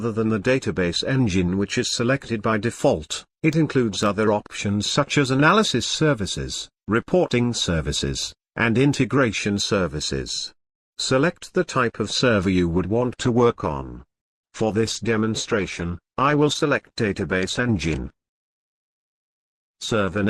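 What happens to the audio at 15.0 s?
At 15.0 s you're inside a stretch of adaptive stream at a lower bitrate, running from 12.75 s to the end. The stream switched abruptly, with no gap, to a leaner version. Nothing comes through above 12.1 kHz and codec smearing rises, which fits a drop to around 16 kbit/s.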